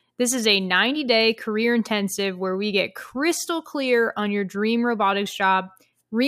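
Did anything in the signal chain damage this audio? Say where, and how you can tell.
No, nothing in this speech recording stood out as damaged on listening.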